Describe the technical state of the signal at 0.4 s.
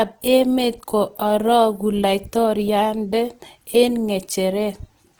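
At 0.4 s the speech carries Opus compression, present throughout. It sounds rough and grainy, likely from a low-bitrate music-mode encode filling starved bands with noise.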